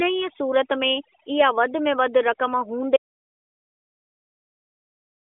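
A noise reduction stage was set far too aggressively, and it acts on the whole clip. It pulls individual frequency bands down or shuts them off whenever they sit near its noise estimate, so the quieter parts of the speech are removed along with the hiss. This overdone noise removal makes the background drop and break up into twinkling specks. The voice sits within the narrow phone-line band of the AMR narrowband mobile link, which carries nothing above about 3.6 kHz.

At 2.97 s the input signal was lost, most likely because a device disconnected, a link failed or something was muted, while the recording kept writing silence. This audio dropout to silence cuts the speech off mid-flow and never recovers. Everything from 2.97 s to the end is silence, with no room tone and no twinkling noise-reduction residue, and whatever followed is gone.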